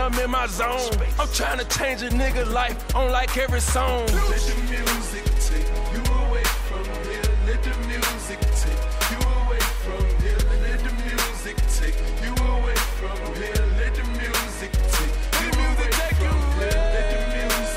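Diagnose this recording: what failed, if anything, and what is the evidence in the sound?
Nothing stood out on listening, and no stage of the chain shows any sign of having failed.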